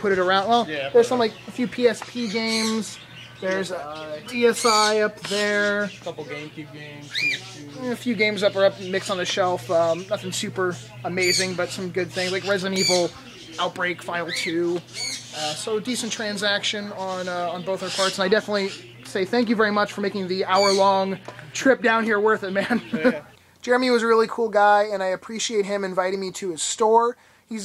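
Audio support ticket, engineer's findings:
No audible problems turned up on a listen, so there's nothing to chase on this one.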